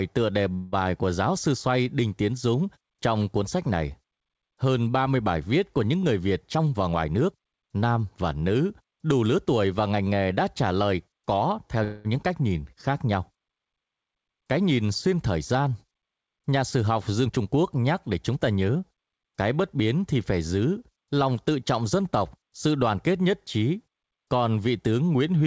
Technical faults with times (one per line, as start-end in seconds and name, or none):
0.54-0.74 call audio freeze
6.55-7.85 jitter buffer speed-up
11.84-12.07 call audio freeze
17.26-19.21 jitter buffer speed-up